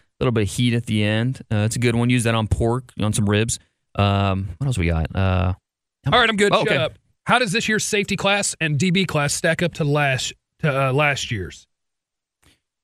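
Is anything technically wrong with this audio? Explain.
Yes. From 3.05 to 9.83 s, a time-stretched section runs 1.36 times faster at unchanged pitch, likely from dropped short slices. It sounds rushed, with syllables packed tighter on the waveform and harmonics unshifted on the spectrogram.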